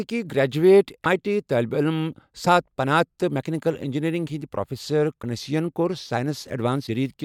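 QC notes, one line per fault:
1.03–1.06 s, 2.44–2.47 s, 5.21–5.24 s, 6.86–6.89 s, broken MP3 bit reservoir: four brief jumps in the speech, each roughly 26 ms long, about one MP3 frame, with a short chirp or noise burst where the audio skips ahead. The first falls just before "آیی ٹی طٲلبہِ علم", the second just after it, and the third just after "مکینیکل انجینئرنگ ہٕنٛدۍ پروفیسر". The likely cause is dropped frames: the following frame reaches back into the reservoir for its borrowed bits and decodes another frame's bytes instead.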